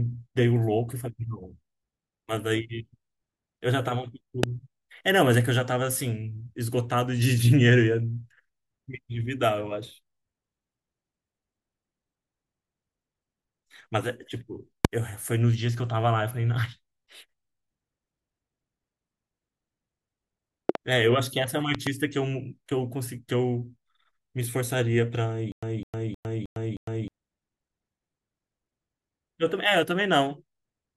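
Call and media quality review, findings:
Loud pop at 4.43 s and 14.85 s, single; double pops at 20.69–20.77 s and 21.75–21.89 s. Peaks about 20 dB above the speech, about 15 dB on the last pair. Likely a voltage step from a switch, static or driver glitch riding over the signal.

Stutter with silent gaps, 25.52–27.08 s. The same 206 ms fragment repeats five times, each followed by about 106 ms of digital silence, a 312 ms cycle. Likely a stalled player or stream replaying its last buffer on each retry; the intervening audio is lost.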